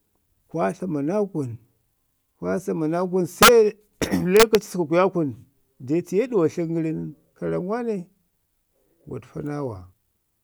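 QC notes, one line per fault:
3.43–3.49 s and 4.37–4.55 s, integer overflow: right after "kwa samanaa kun" the loud speech peaks run about 4 dB past full scale, then about 1 dB later, and wrap to the opposite sign instead of limiting, so you get harsh cracks far nastier than clipping.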